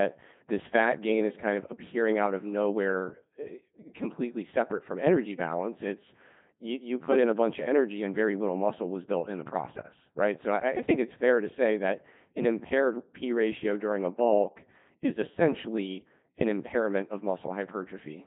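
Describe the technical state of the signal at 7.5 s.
At 7.5 s the speech is passing through a Codec 2 vocoder, as it does for the whole clip. Only pitch, voicing, energy and a coarse spectral shape survive. The voice is rebuilt from sine waves, which sounds robotic and buzzy. Nothing remains above 3.8 kHz. The heavy damage fits a rate near 2.4 kbit/s.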